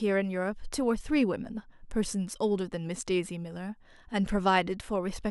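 No technical faults can be heard anywhere in the speech.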